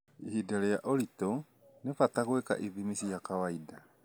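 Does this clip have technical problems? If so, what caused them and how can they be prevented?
No, nothing technical stands out in this speech clip, so there's no cause to track down and nothing to prevent.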